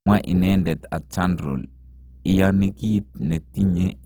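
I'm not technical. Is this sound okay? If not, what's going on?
No. From start to finish the speech has a rough, grainy edge, and that damage is plain to hear. The likely cause is Opus compression, the kind used by many calls and streaming apps. It squeezes the file by saving only a rough sketch of each slice of sound. Where detail is missing, it fills gaps with copied or noisy material. That patching is the grit you hear. Nothing sounds muffled, though.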